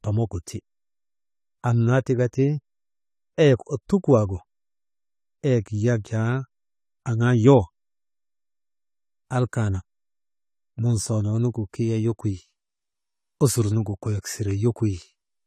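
Speech with AAC compression throughout: likely an AAC-LC encode at a low bitrate, which fits about 32 kbps, cuts everything above 14 kHz, leaving a dull top end and plainly audible codec damage.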